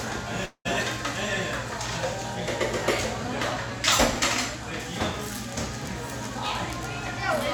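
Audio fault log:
0.45–0.67 s, long network dropout: The sound breaks off and is replaced by a smeared, buzzy continuation of its last moment. That filler lasts about 194 ms and fades away. Near-silence holds for about 90 ms. The audio then resumes further along, with about 200 ms of material gone for good. This is likely a stall in packet delivery, where the receiver stretches what it last had and then gives up.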